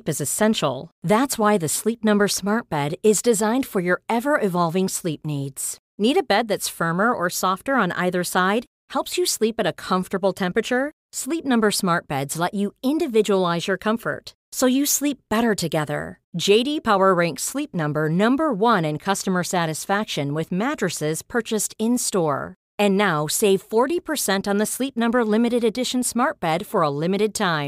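Throughout the speech there is sample clock jitter: the converter's clock wanders by roughly a microsecond or two, so each sample is taken slightly off time. The resulting error sits around 35 dB below the signal, heard as a hiss that thickens on loud, bright syllables and disappears in pauses.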